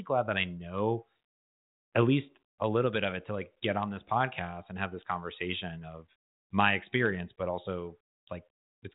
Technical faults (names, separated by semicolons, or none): none